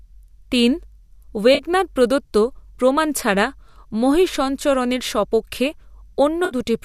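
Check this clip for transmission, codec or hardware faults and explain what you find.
Two transmission dropouts are audible in this speech clip. Both are AAC frame loss with concealment.

The first runs from 1.55 to 1.62 s, just before "প্রদত্ত প্রমাণ ছাড়া মহীসঞরণের". The second runs from 6.45 to 6.55 s. They cover about 40 ms and 60 ms of missing audio. The decoder patched each gap by reusing the last good spectrum. Each sounds like a brief smeared, phasey blur.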